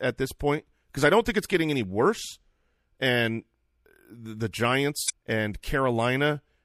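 MP3 compression runs through the whole speech clip, and its damage is plainly audible. The sound points to a bitrate around 64 kbps, likely too few bits for the encoder, which dropped weaker frequency content that flickers from frame to frame, giving a watery, smeared quality.

Damaged data in the compressed stream follows from 5.06 to 5.10 s. A stretch of the encoded stream is corrupt there, so the decoder misreads or rejects those frames, loses sync and hunts for the next valid frame header, leaving an audible disruption in the speech.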